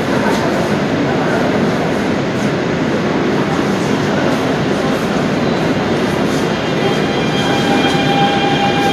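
Everyday sounds carry plainly audible Vorbis compression throughout, likely from low-bitrate encoding near 35 kbps: hissy, grainy treble, blurred attacks, and a spectrogram showing a hard ceiling at 14.2 kHz.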